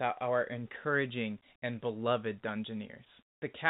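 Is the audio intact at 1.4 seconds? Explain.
Yes, the speech at 1.4 seconds is intact, with no dropout, glitch or distortion there beyond the narrowband call-path sound that tops out at 4 kHz.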